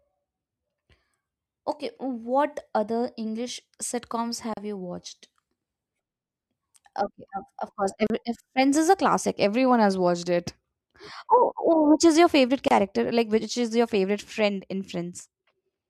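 The speech breaks three times with a gap at a join of encoded pieces: at 4.54 s before "you watched", at 8.07 s after "of course", and at 12.68 s after "which is your favorite". Each silence lasts about 28 to 36 ms. Separately encoded segments were butted together untrimmed. Their encoder delay and final-frame padding leave a brief hole, its edges smeared by the codec, before the sound resumes.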